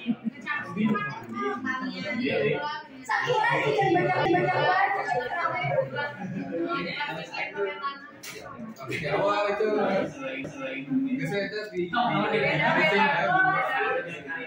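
At 4.25 s and again at 10.44 s there is a CD skip: a knock or surface flaw throws the laser onto a neighbouring turn of the disc's spiral, so the player mutes for a few milliseconds and resumes from a different point. Each is a brief tick followed by a sudden jump in the material. A simple dropout would leave a gap and carry on where it stopped, but here the continuity breaks.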